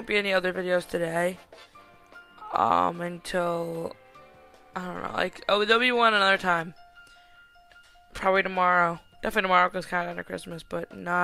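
Nothing stood out on listening to this clip.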